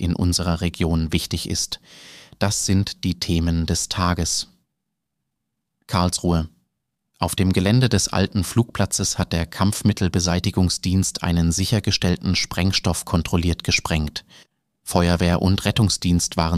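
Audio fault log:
0.47, 1.59, 11.07 and 15.34 s: dropped samples. Each time a single sharp click cuts through the sound and is gone at once. The likely cause is a tiny gap of about 0.7 ms in the sample stream, so the waveform leaps from one value to a later one with nothing in between. On a waveform this shows as an abrupt step; on a spectrogram, as a thin vertical line spanning the whole frequency range.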